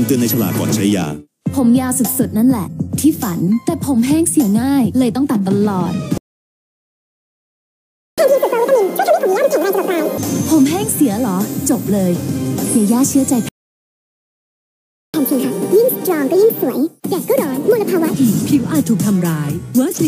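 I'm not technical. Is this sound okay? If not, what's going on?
No. There are two playback stalls, at 6.18 to 8.18 s and 13.49 to 15.14 s: the sound goes silent for 2 s and about 1.65 s, likely because the player ran short of data. After each, you hear catch-up at higher speed. From 8.18 to 10.18 s it runs at double speed, roughly ten semitones higher. From 15.14 to 18.14 s it runs at 1.5 times speed, about seven semitones higher. Both then return to normal.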